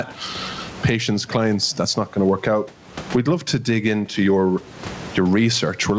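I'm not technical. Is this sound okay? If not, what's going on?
No. Gain pumping runs through the whole clip: the loudness keeps rising and falling by a large amount, pressing loud and soft parts closer together. The likely cause is a microphone set far too loud, with an automatic limiter pulling it down on every loud sound.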